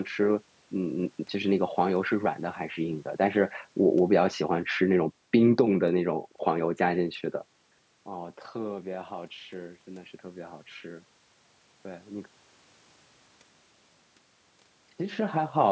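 Listening to the speech, nothing stood out as a technical problem.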